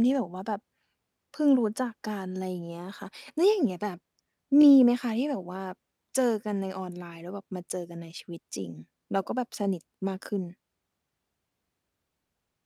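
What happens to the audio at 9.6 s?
Overlapping chunks: 5 s chunks overlap by 20 ms, so from 9.64 to 9.66 s that slice of speech plays twice, a brief click-like stutter.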